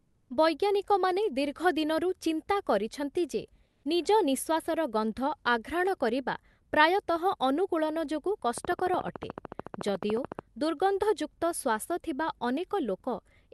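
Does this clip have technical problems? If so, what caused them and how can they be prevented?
Yes. Comfort noise in place of the background appears at 0.00–0.29 s, just before "ବୈଜ୍ଞାନିକମାନେ ଦୀର୍ଘ ଦିନରୁ ଚିନ୍ତା", and at 3.65–3.83 s, just after "ଦିନରୁ ଚିନ୍ତା କରିଛନ୍ତି ଯେ". In those gaps the real room tone gives way to a flat, featureless hiss about 1 to 2 dB quieter. This is likely Opus discontinuous transmission: the sender went silent and the receiver synthesised filler noise. Disabling DTX on the sending side prevents it.

A train of clicks runs from 8.58 to 10.40 s: around thirty evenly spaced pops at 13.8 per second, peaking around 10 dB above the speech. The likely cause is electrical interference or a faulty connection or power supply injecting pulses. Shielding cables and fixing the interface or driver prevents it.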